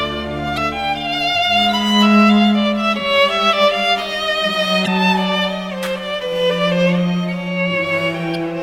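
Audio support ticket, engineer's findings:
Damaged data in a compressed stream at 0.54–0.58 s, 4.84–4.88 s and 8.32–8.36 s: brief glitches in the music as the decoder misreads corrupt frames, loses sync and hunts for the next frame header.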